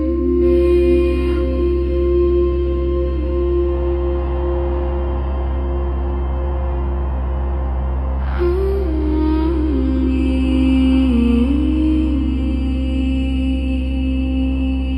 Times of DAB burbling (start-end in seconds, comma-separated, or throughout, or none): none